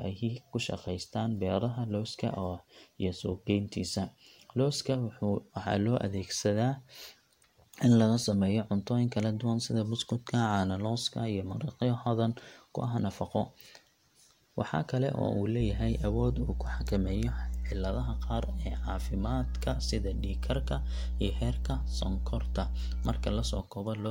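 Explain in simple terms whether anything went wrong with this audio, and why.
Something did go wrong: mains hum appears at 15.6 s and continues until 23.6 s. It is a steady low buzz at 60 Hz, roughly as loud as the speech itself, so it competes with the talking rather than sitting quietly underneath it. Hum like this comes from the electrical supply leaking into the recording, typically through a ground loop between connected equipment or from a transformer placed too close to the cables or microphone.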